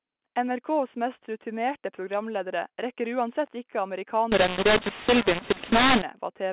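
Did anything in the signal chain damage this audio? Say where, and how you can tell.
Yes. mu-law and A-law mixed up, from 4.32 s to 6.02 s: at the codec stage, speech encoded with G.711 mu-law is being decoded as A-law, so each 8-bit code maps to the wrong step on the logarithmic scale. You can hear the levels scramble, with some peaks too loud and others shrunken, and the speech turns harsh and gritty. Quiet gaps fill with noise because the smallest codes land well above silence. The telephone band, capped at 4 kHz, stays intact throughout.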